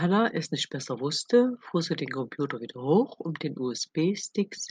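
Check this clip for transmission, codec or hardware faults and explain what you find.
Nothing stood out on listening to this speech recording that would point to a transmission, codec or hardware problem.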